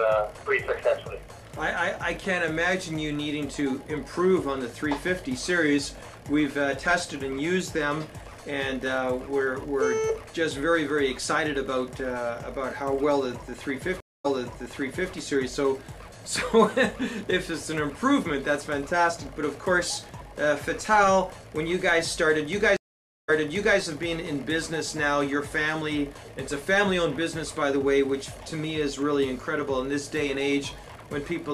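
The connection dropped twice, each time forcing a stream reconnect: the player stalled, re-established the link and restarted its decoder mid-stream, with the server resending already-played audio. At 14.00 to 15.13 s the sound cuts to 240 ms of silence, then resumes 0.88 s earlier, repeating that stretch. At 22.77 to 23.79 s a longer 517 ms gap gives way to audio rewound by 0.51 s.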